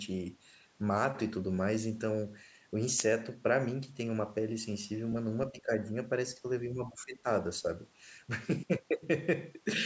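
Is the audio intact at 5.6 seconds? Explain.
No. From 5.52 to 5.91 s the echo canceller likely could not separate the talker from loudspeaker echo while both sides spoke, so it turned everything down. This speech suppressed in double talk makes the speech dip, at worst by about 15 dB, for roughly a third of a second.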